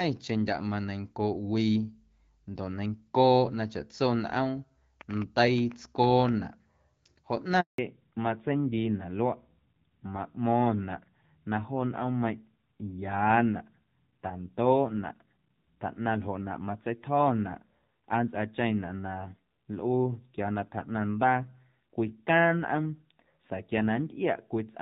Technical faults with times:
5.01-6.30 train of clicks
7.60-7.78 handover gap
7.78-24.81 fallback to narrowband

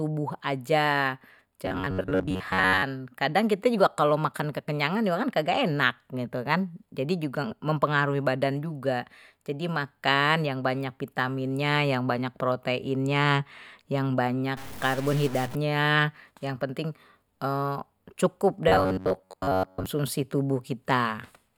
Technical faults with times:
1.66-2.83 robotic sound from repeated short buffers
14.57-15.55 stuck bit
18.68-19.86 robotic sound from repeated short buffers

